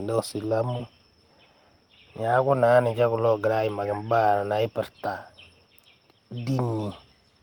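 At 0.77 to 0.81 s there is a short concealed packet loss. 20 ms of the speech arrived too late, and the receiver filled 16 ms by extending the preceding sound, then blended back. It's heard as a brief smear. A spectrogram shows a small frozen, flattened patch, and the waveform a copied-looking stretch.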